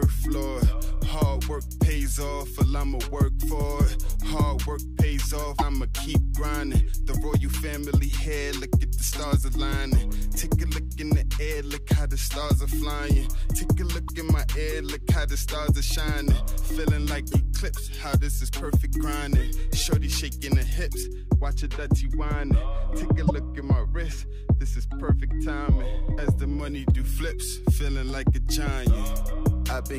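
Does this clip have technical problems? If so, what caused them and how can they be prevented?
Yes. Brief glitches occur at 5.55 to 5.62 s, at 14.08 s, at 17.28 to 17.34 s and at 23.27 to 23.31 s. This is damaged data in a compressed stream: corrupted frames made the decoder misread them and lose sync until it found the next frame header. Verified transfers with checksums and error-resilient containers prevent it.

From 21.03 to 26.60 s the sound turns dull and muffled, with treble sloping down to about 14 dB lower at 10 kHz than at 1 kHz. De-emphasis was applied wrongly, adding a treble cut either where there was no pre-emphasis to undo or on top of one already applied. Checking emphasis flags so de-emphasis runs once, and only when needed, prevents it.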